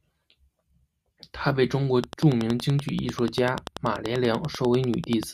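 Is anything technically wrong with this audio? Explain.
Yes. From 2.04 to 5.24 s, after "她被中国", a train of clicks, likely interference pulses, adds about thirty regular ticks at 10.3 per second, peaking about 10 dB above the speech.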